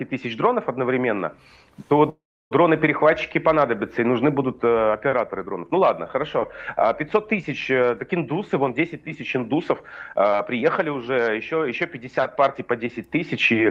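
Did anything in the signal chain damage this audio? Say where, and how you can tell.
Yes. A call audio freeze sits at the network and jitter-buffer stage, from 2.09 to 2.53 s. The last sound is stretched into a fading buzz, then about 300 ms of silence. The audio then resumes where it stopped. Delayed packets likely starved the buffer.

A jitter buffer speed-up follows from 10.13 to 11.61 s. The sound runs at about 108% speed with unchanged pitch, so it feels hurried. The receiver trimmed short pitch-period pieces, roughly a tenth of a second in total, to shed built-up delay.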